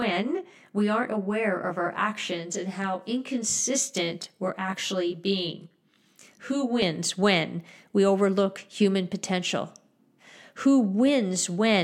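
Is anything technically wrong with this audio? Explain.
Yes. From the start to 6.82 s, the speech shows channel delay (comb filtering). One channel runs roughly 20 ms behind the other, and the two are summed to mono. Content shared by both cancels at evenly spaced frequencies. The first notch falls around 30 Hz, and further notches repeat roughly every 50 Hz up the spectrum. The speech sounds rough or slightly doubled across that stretch.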